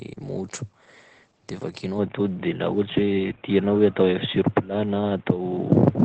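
Opus compression, throughout: the audio sounds muffled and hoarse, with nothing above 8.8 kHz. This points to the codec's speech mode at a low bitrate of around 12 kbps, likely heavy compression.

Input switched to a poorer device, from 1.99 s to the end: the sound turns dull with no gap, losing everything above 3.8 kHz. The level shifts by around 5 dB and a faint new noise floor appears, likely from a different microphone or headset.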